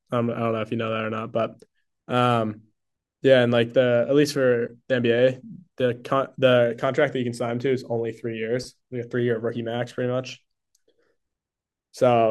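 No technical faults can be heard anywhere in the speech. There is nothing to place on a timeline.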